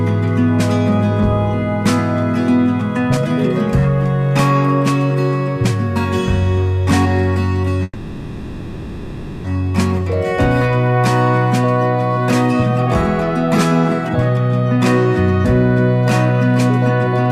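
At 7.83 s the audio stops moving forward and the last sound is stretched into a fading buzz or hiss that lasts until 9.46 s, about 1.6 s in all, likely because packets were held up and the jitter buffer ran dry. Unlike a dropout, nothing is lost: the audio resumes exactly where it stopped, so the freeze inserts a gap filled with sustained, decaying sound instead of cutting content out.

From 16.77 s to 17.31 s a jitter buffer speed-up is audible. The receiver had more audio queued than it wanted and trimmed it by repeatedly removing tiny pitch-period slices, about 50 ms altogether. The result plays at roughly 109% speed yet keeps its original pitch, which separates it from a sample-rate error, where pitch would rise along with speed. It comes across as a brief hurried rush.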